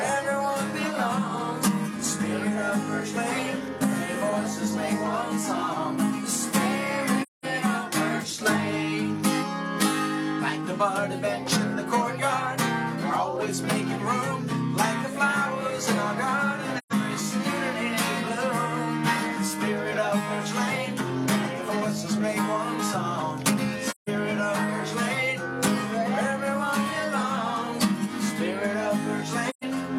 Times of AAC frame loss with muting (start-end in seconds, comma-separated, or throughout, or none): 7.22-7.45, 16.78-16.92, 23.90-24.09, 29.49-29.64